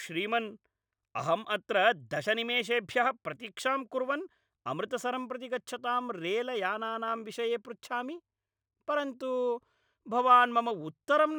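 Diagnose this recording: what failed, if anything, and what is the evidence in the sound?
Imaging from linear upsampling at rate conversion: straight-line interpolation leaves a faint metallic shimmer, visible on a spectrogram throughout as a mirrored spectrum from 12 to 24 kHz, roughly 35 dB down.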